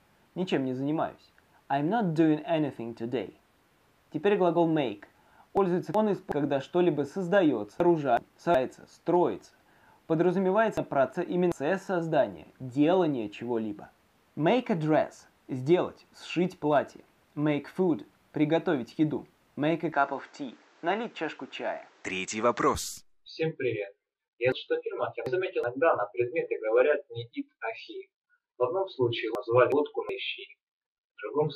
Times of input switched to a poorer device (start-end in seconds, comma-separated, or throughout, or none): 19.92-22.75